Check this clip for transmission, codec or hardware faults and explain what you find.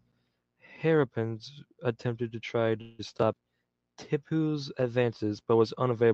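One transmission fault is audible: a call audio freeze from 2.81 to 3.01 s, right after "attempted to try". The speech halts and the final sound is stretched into a fading buzz or hiss for about 174 ms, most likely because delayed packets let the jitter buffer run dry and the receiver extrapolated the last audio. When the packets arrive, the speech resumes exactly where it paused. Nothing is lost, but everything after that point runs about 174 ms late. The call codec's band limit near 8 kHz remains audible throughout.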